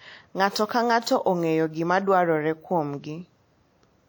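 From start to finish the speech carries plainly audible codec damage, likely from WMA compression. The encoder works in long transform blocks, so its quantisation noise smears across tens of milliseconds around each sound. That gives a ringing, washy quality. A hiss rises and falls with the signal, and weak detail drops out where fine lines were zeroed. The damage fits a low rate near 48 kbps. Content still reaches 20.1 kHz.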